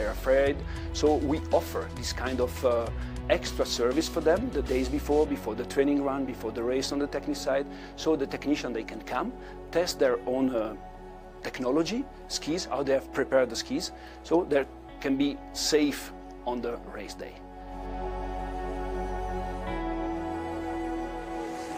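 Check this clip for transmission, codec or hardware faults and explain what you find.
I find no faults in this clip to explain.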